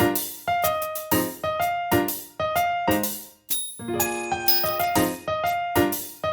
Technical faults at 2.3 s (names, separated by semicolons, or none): none